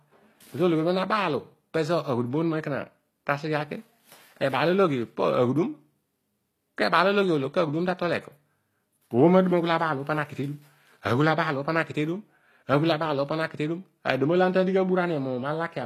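Likely HE-AAC compression throughout this speech recording: s sounds turn gritty and metallic because the treble is synthesised by copying lower bands upward, the output stops at 14.9 kHz, and the damage is plainly audible, which fits a bitrate around 24 kbps.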